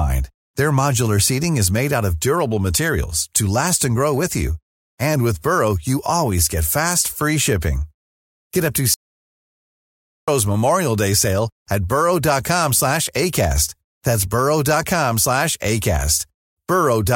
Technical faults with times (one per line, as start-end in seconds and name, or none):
8.94-10.28 audio dropout to silence